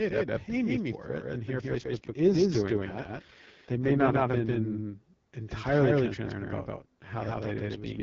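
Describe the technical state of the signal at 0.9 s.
A doubled audio track is present at 0.9 s, as it is throughout the clip: a second full-band copy of the speech trails the original by roughly 150 ms at about equal level, likely from a second, slower capture path or misaligned edit, giving a dry, abrupt slapback echo over the light AMR-WB codec coloration.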